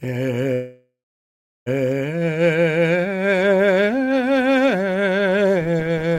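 Music, with a call audio freeze from 0.53 to 1.68 s: packets were likely delayed until the jitter buffer emptied, so the last sound fades into about 0.71 s of silence, then resumes where it stopped, now 1.13 s later.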